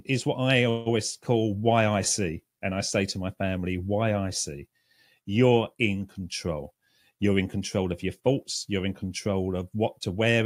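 At 0.69 s, just after "is what I", the sound briefly stalls into a fading buzz for about 0.18 s, then resumes with nothing lost. This call audio freeze likely came from delayed packets draining the jitter buffer. From 6.62 to 8.79 s, after "I see you're in", the speech runs hurried at unchanged pitch, about 108% speed. This jitter buffer speed-up trimmed pitch-period slices, roughly a fifth of a second overall, to reduce the accumulated delay.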